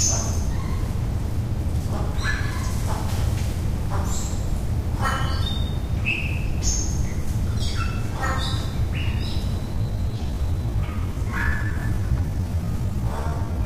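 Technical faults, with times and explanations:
9.70 to 13.65 s, time-stretched section: from 9.70 s to the end the audio suddenly runs at 0.63 times its pace with the pitch unchanged, sounding dragged. Software likely lengthened this part by repeating short pieces.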